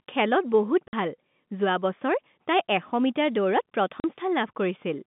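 It's a speech recording over a telephone line, band-limited to roughly 150 Hz to 3.6 kHz, with packet loss filled with silence: hard-edged dropouts at 0.88 s (50 ms) and 4.0 s (40 ms), where the receiver simply inserted silence for missing packets, which fits 10 ms packets.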